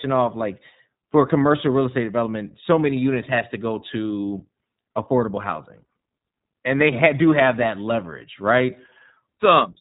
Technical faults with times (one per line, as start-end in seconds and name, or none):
0.00-9.81 iLBC codec